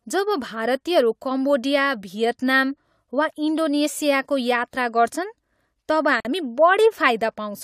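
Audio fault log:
6.20–6.25 s, gap at a join of encoded pieces: the speech drops out for about 48 ms, a brief hole with edges smeared by the codec, then resumes exactly where it stopped, with nothing missing. The audio was encoded as separate pieces and joined untrimmed, so the silent start-up delay of one encoder run and the padded final frame of the other both remain at the seam.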